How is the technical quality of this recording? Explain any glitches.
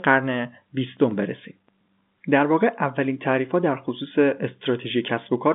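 No glitches can be heard anywhere in the speech. It comes over a telephone line with G.711 A-law coding, so the sound sits in the narrow band from about 200 Hz to 3.6 kHz, with a thinner, boxier tone than full-range audio.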